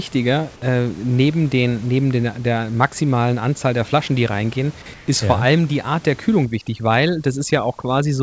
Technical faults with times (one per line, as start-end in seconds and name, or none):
4.94-5.08 comfort noise in place of the background
6.45-8.23 overdone noise removal